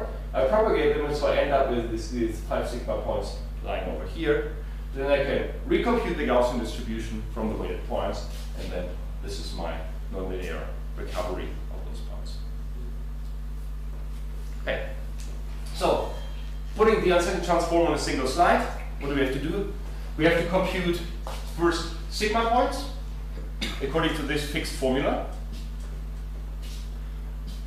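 No technical fault can be heard anywhere in this audio. Nothing in the sound breaks, drops or shifts at any point.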